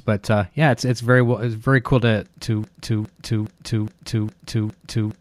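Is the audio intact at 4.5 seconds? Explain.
No. At 4.5 seconds the audio is caught in a broken-record loop. It begins at 2.64 s, right after "it's very cool to", and runs to the end of the clip. A fragment of about 412 ms repeats exactly, back to back, six times. It sounds like a stuck, stuttering record. The likely cause is a stalled player, encoder or stream resending its last buffered piece. Whatever should have followed is lost.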